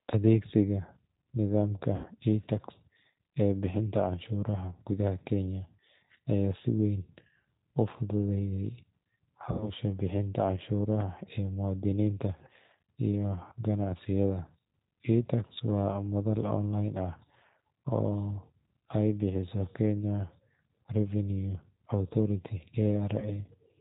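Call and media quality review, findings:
G.729 codec, whole clip: speech band-limited to 4 kHz, rough and slightly synthetic, plainly audible. Unlike a simple low-pass, the damage comes from 8 kbit/s filter-plus-pulse rebuilding of each 10 ms frame, hence the grainy texture.

VoIP packet loss concealed by the speech codec, 1.96–2.08 s, 9.52–9.70 s, 23.20–23.30 s: stretched buzzy tone or coloured noise fading out, not silence. Suggests about 80 ms lost at the first two, 20 ms at the last. The decoder extrapolates from the last pitch and filter and then recovers slowly, unlike a hard dropout.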